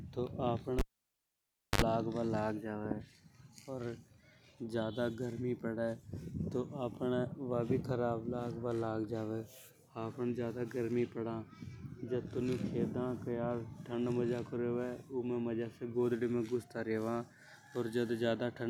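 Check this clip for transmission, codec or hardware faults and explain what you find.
A live cable was pulled and plugged in between 0.79 and 1.82 s. The broken connection leaves near silence for about 0.98 s, bracketed by pops, and a 66 ms burst of 50 Hz mains buzz as the tip makes contact before the speech returns.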